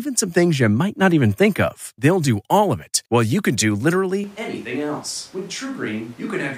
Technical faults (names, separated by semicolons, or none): switch to a distant microphone